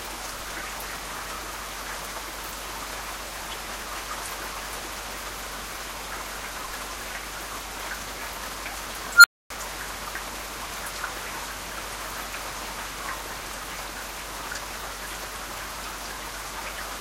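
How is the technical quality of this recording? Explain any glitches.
One glitch stands out. At 9.15 s a squeal near 1.5 kHz swells over about 0.09 s, clips, then drops to 0.26 s of silence until 9.5 s: an unstable filter whose feedback runs away and overflows.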